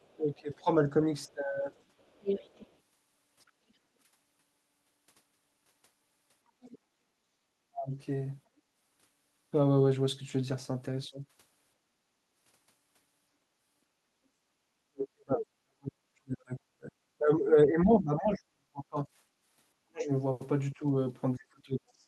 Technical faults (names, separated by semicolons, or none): other side's voice leaking through; speech suppressed in double talk; background gated by the echo canceller